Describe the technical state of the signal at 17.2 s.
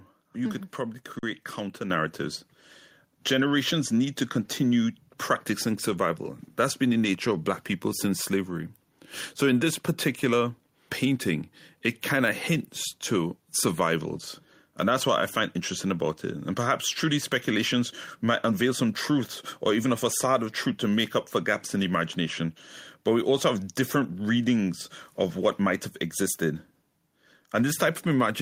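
At 17.2 s the speech signal is intact, with no audible dropout, clipping, distortion or other fault at that moment.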